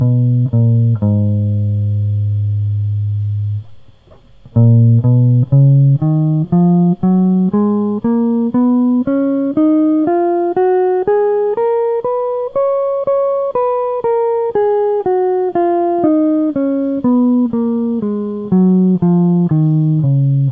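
No faults found anywhere in the music.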